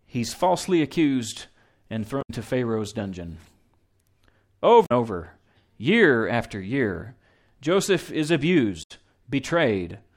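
A speech clip with damaged data in a compressed stream. Short blips break in at 2.18–2.30 s, after "he's falsely accused and", at 4.82–4.92 s, before "over year after year", and at 8.79–8.91 s. Corrupted frames there throw the decoder out of sync until it finds the next frame header.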